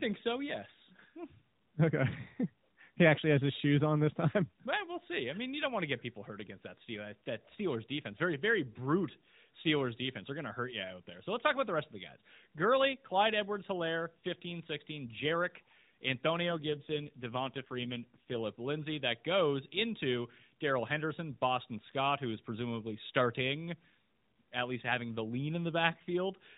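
From 16.46 to 18.39 s the speech turns rougher, buzzier and more synthetic, with no gap and no change of band. This is an AMR rate drop: the narrowband mobile codec steps down to a lower rate, which fits a switch from 12.2 to 5.9 kbps, trading speech detail for error protection.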